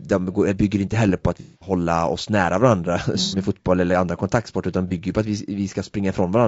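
Throughout the clip the speech carries plainly audible coding damage, a rough, grainy texture of the kind that points to low-delay AAC compression, likely AAC-ELD at around 32 kbps. This video-call codec codes each short frame as a set of frequency lines with a low-delay window, and at this bitrate too few bits reach the detail between harmonics and at the top of the band, so the voice loses its clean edge.

AAC frame loss with concealment then breaks in three times. From 1.40 to 1.72 s the audio turns into a smeared, noisy or phasey patch, which fits about 210 ms of lost frames. A shorter patch follows from 3.23 to 3.37 s, about 90 ms, and a brief one at 4.88 to 4.92 s, about 30 ms. In each gap the decoder had no data and rebuilt the sound from the last good spectrum, which is why these spots sound synthetic rather than silent.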